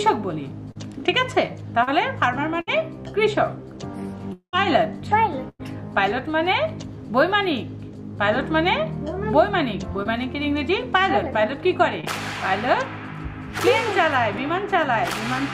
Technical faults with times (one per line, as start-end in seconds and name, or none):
0.71-0.77 short concealed packet loss
1.83-1.89 short concealed packet loss
2.61-2.69 burst of packet loss
4.33-4.55 long network dropout
5.49-5.61 burst of packet loss
10.03-10.07 short concealed packet loss
12.01-12.05 short concealed packet loss